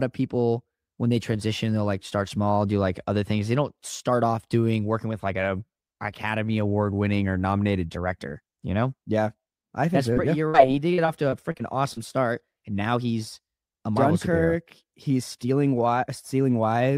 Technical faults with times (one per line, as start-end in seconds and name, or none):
10.13-10.18 short concealed packet loss
10.48-10.56 burst of packet loss
10.94-11.99 repeated packet loss (robotic sound)